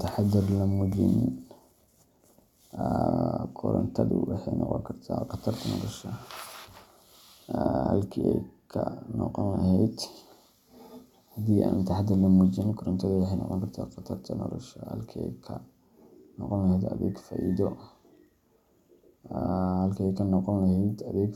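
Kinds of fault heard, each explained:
No kinds of fault are heard in this speech clip.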